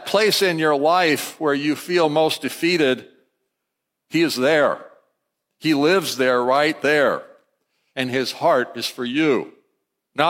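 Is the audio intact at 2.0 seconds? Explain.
Yes, the speech at 2.0 seconds plays through cleanly, with no audible dropout, distortion or other technical fault at that moment.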